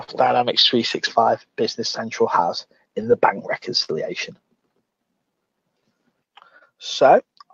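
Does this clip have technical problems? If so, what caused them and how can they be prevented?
Yes. There is clock drift between sender and receiver throughout. The sender's clock runs roughly 3 percent slow. The receiver keeps running short of audio and must pad it. Small timing hiccups recur unevenly across the clip. Locking both ends to a common clock, or resampling to match rates, prevents this.

There are three short stalls from late packets. They occur at 0.03 to 0.10 s (44 ms held), 3.84 to 3.90 s (39 ms) and 6.58 to 6.63 s (26 ms). Each time, the jitter buffer ran dry. The last sound was held until data arrived. Nothing is lost. A deeper jitter buffer would absorb these late arrivals.

Repeated timing corrections run from 1.20 to 7.49 s. The receiver repeatedly stretches small pieces, playing at about 98 percent speed. That adds around a tenth of a second overall. Fixing the clock mismatch removes the need for these corrections.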